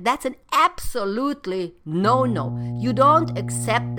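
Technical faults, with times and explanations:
2.02 s to the end, mains hum: right after "an absolutely" a steady low 60 Hz tone with some low harmonics appears and sits only about 5 dB under the speech. The power line is leaking into the signal through a ground loop or nearby transformer.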